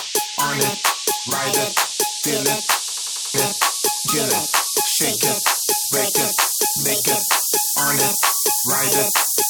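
From 2.88 to 3.34 s there is a system hang loop: playback stalled while the audio hardware kept replaying the same ring buffer. A 93 ms slice, which fits a 4096-sample buffer, repeats five times at about 10.8 Hz, producing a mechanical stutter, and roughly half a second of real audio is lost. On a spectrogram this appears as identical blocks tiled side by side, with vertical seams at each boundary. The waveform shows the same shape copied exactly.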